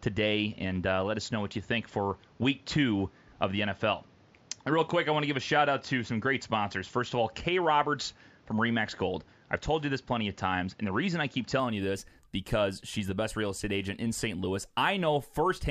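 A speech recording whose input was likely on a poorer device for the first stretch, an input switched to a poorer device from the start until about 11.6 s, after which it returns to the better source just before "you this because she's". Through that opening section the band stops near 7.3 kHz, leaving the sound duller and boxier, with a faint added noise floor roughly 30 dB under the speech. The change-over brings no gap and no real shift in level, only a sudden gain in brightness and clarity.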